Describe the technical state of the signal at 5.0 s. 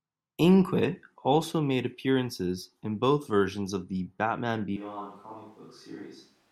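At 5.0 s the recording is most likely no longer coming from the close microphone but from one much further away, a switch to a distant microphone that happens abruptly at 4.77 s and holds to the end. The speech turns roomy and hollow, thinner in the bass, and drops by about 10 dB. With the talker now far from the capsule, the room's background noise rises to sit only some 25 dB under the speech.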